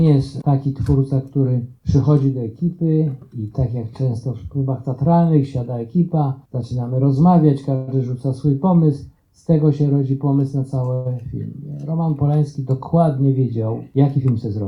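A call audio freeze occurs at 7.75 s and again at 10.94 s. Each time the last sound is stretched into a brief fading buzz or hiss, 122 ms and then 110 ms long, with no silence. The likely cause is delayed packets emptying the jitter buffer. The audio resumes where it stopped, so nothing is lost, but the playback delay grows by that amount.

A jitter buffer speed-up runs from 14.18 to 14.62 s. The receiver trims short pitch-period slices to shed the extra buffered delay, removing around 50 ms in total. The sound plays about 11% faster at unchanged pitch and comes across as hurried.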